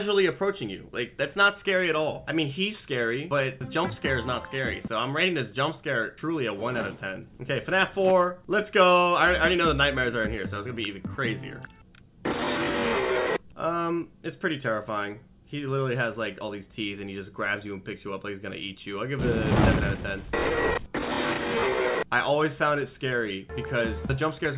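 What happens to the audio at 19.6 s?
Nothing goes wrong at 19.6 s; the audio plays through that moment intact, with no dropout, click, glitch or other fault.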